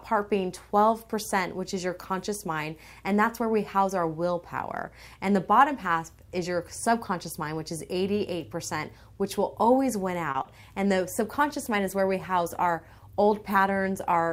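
At 10.31 s the sound hangs for a moment, held a little too long, until 10.36 s. This is a short stall from a late packet. The jitter buffer ran dry while waiting, so the receiver stretched the last sound for about 30 ms and then resumed from exactly where it left off. Nothing is lost, but everything after it plays about 30 ms later than before.

Two brief smears follow, from 10.42 to 10.46 s and from 10.60 to 10.64 s. Each is a short concealed packet loss: 20 ms of audio never reached the decoder in time. The receiver filled each gap by carrying the previous sound forward, continuing its pitch where it was tonal or shaping noise where it wasn't, then blended back into the real signal. The original 20 ms in each gap is gone.

From 11.05 s to the end of the clip the sound turns coarser and loses detail. This is a call bitrate drop. The call's bandwidth estimate fell and the Opus encoder was told to cut from 128 kbps to 22 kbps, so it spends far fewer bits on each frame and codes the audio more roughly. 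The bitrate does not recover before the clip ends, so the degraded quality runs to the last second.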